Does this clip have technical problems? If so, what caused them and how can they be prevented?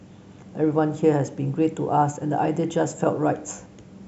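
No, the speech signal has no audible technical faults, so there is nothing here that needs a cause or a preventive measure.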